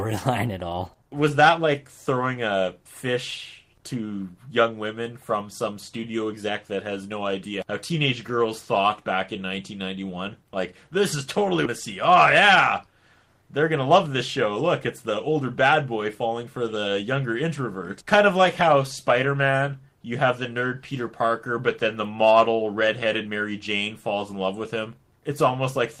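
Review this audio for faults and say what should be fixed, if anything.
At 11.65 to 11.67 s there is a skip ahead. A stretch of incoming audio, around 400 ms of it, was discarded while later audio was already queued, either lost in transit or dropped when the jitter buffer overflowed. Nothing was filled in, so playback jumps straight across the missing material and the sound on either side is spliced together almost seamlessly. Latency falls by roughly the same amount. To prevent this, give the jitter buffer enough headroom to absorb bursts without overflowing, and add loss concealment so that dropped audio is bridged instead of cut out.

From 13.42 to 14.07 s there is a jitter buffer speed-up. The buffer had built up more delay than its target, so the receiver trimmed short pitch-period-length pieces out of the signal repeatedly, removing about 50 ms in total. Over that span the sound plays at 106% of normal speed with its pitch unchanged, which gives it a slightly hurried, rushed quality. 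To prevent this, reduce packet bunching on the network path and have the buffer shed excess delay more gradually, so the rate change stays below what a listener can notice.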